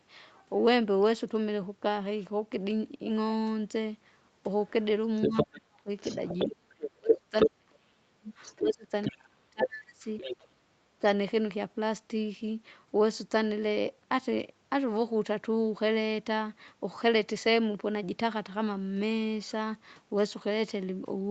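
From 4.69 to 7.49 s there's the other side's voice leaking through, a second talker sitting a bit louder than the main one. That's likely loudspeaker echo the canceller didn't fully strip from the mic. It returns from 8.43 to 10.47 s, a bit quieter this time.

Overlapping that, we get speech suppressed in double talk: from 5.27 to 5.9 s, then 6.46 to 11.04 s, the main talker dips hard, down nearly to silence in places. In the longer stretch about three seconds are affected. It's likely the canceller turning everything down while both sides talk.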